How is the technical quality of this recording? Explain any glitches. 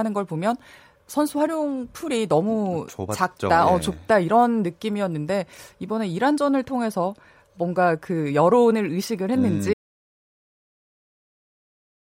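The recording has one clear glitch. An audio dropout to silence begins at 9.74 s and runs to the end, about 2.4 s. The input was likely lost, perhaps through a disconnect or mute, while recording continued writing silence. The speech cuts off mid-flow into total silence, with no room tone.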